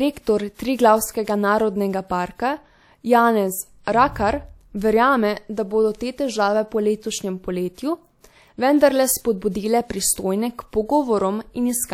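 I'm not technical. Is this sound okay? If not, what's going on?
No. There is pre-echo at 0.54 s, 3.83 s and 7.74 s, right after "te težave po letošnjem". The compression blurs noise backwards in time. A short hiss arrives 36 to 48 ms before sharp speech sounds, making them soft and smeared.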